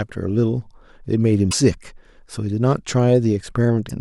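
Speech, with two brief glitches where the audio jumps ahead, at 1.50 to 1.54 s and 3.88 to 3.91 s. They last about 39 ms and 26 ms, against an MP3 frame of 26 ms. The likely cause is a broken MP3 bit reservoir. Frames were lost, and the next frame read borrowed data from the wrong bytes.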